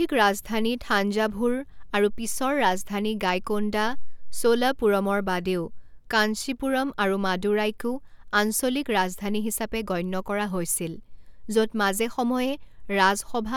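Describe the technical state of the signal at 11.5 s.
At 11.5 s the speech signal is intact, with no technical fault present at that moment.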